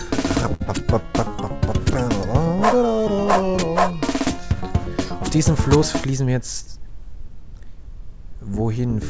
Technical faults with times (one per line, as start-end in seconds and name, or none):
0.54-0.62 short stall from a late packet
0.66-0.68 short concealed packet loss
6.06-6.93 jitter buffer speed-up